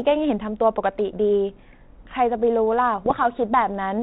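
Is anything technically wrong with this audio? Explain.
Yes. From 3.04 to 3.35 s there are bit errors on an ADPCM link. At a low error rate, around a third of a percent, flipped bits corrupt the decoder's step size and predictor, so each error rings on briefly as pops and rough bursts with sudden level jumps. On a waveform these appear as spiky, uneven amplitude excursions; on a spectrogram they show as short broadband vertical streaks. The underlying 32 kbit/s G.726 coding is working normally, with only light added noise and nothing above 4 kHz.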